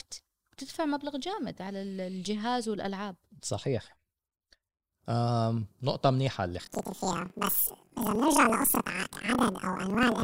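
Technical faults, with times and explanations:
6.60 to 10.24 s, planar audio read as interleaved: from this point each block of samples, which holds all of one channel's samples followed by all of the other's, is being read as if the two channels alternated sample by sample. Each block of 2048 samples, about 42.67 ms, is therefore played twice at double speed, first one channel and then the other. Because the blocks are this long, the speech jumps an octave, 12 semitones, higher, and a flutter runs through it at 23.4 Hz, the block rate, while the overall pace stays correct.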